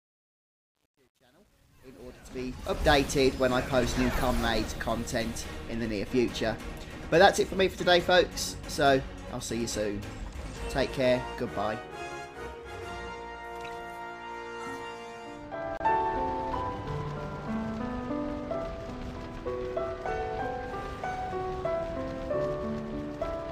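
From 0.0 to 2.89 s, the opening fade-in shows truncation distortion. The gain stage behind the fade keeps too few bits and adds no dither. The grain fits about a 10-bit word length. At low levels the waveform collapses into coarse square steps. The sound is gritty. It is worst from 0.0 to 2.43 s. By 2.89 s the grit clears.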